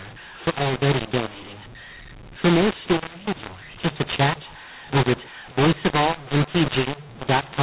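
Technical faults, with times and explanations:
Throughout: mu-law and A-law mixed up. Speech was coded as mu-law but decoded as A-law, scrambling levels, so it sounds harsh and pauses fill with noise.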